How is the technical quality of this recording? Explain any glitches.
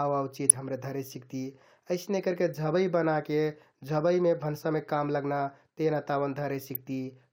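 Two brief burbling bursts mar the speech, at 0.49 to 0.56 s just before "धरे सिकति" and at 6.75 to 6.81 s. This is DAB burbling: weak reception left bit error rates of roughly 0.2 and 0.15 percent, letting errors into the audio data so single sub-bands get noise blips or jump in level for up to a frame.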